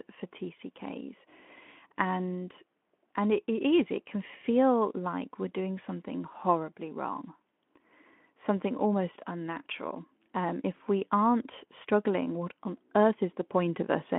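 Nothing in this recording stands out as a technical fault, so there's nothing here to flag.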